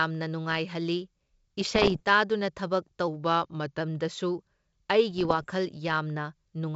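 From 1.61 to 2.02 s and again from 5.11 to 5.47 s, bit errors on the ADPCM link produce pops and rough, level-jumping bursts, each corrupted bit knocking the decoder's predictor off course. Between 3.08 and 3.80 s the speech slows by 5.65% and drops about a semitone (101 cents), likely a drift correction step in clock-matching playback. The wideband band-split coding underneath, which fits G.722 at 64 kbit/s, keeps its faint upper-band hiss.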